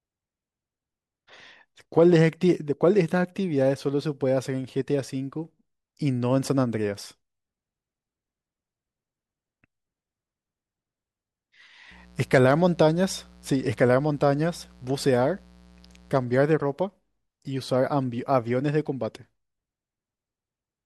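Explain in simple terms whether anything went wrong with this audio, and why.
Electrical interference from the 60 Hz mains supply leaked into the recording, adding a quiet mains buzz under the speech from 11.91 to 16.24 s.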